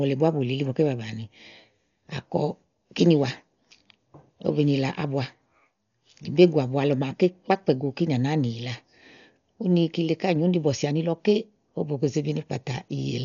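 Throughout, a starved encoder, likely Dolby Digital compression near 48 kbps, cuts the speech off above 6.9 kHz, leaving it dull and heavily fluttering.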